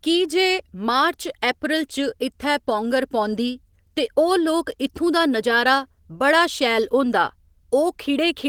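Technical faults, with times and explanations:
No technical faults are present: the speech carries Opus voice compression at light strength, with content reaching to about 20.2 kHz, which points to fullband hybrid coding at around 20 kbps.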